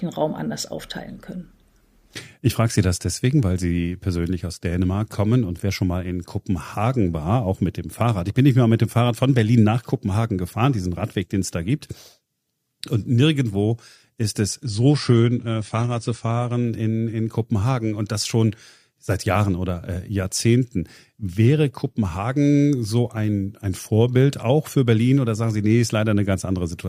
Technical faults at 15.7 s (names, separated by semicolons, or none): adaptive stream at a lower bitrate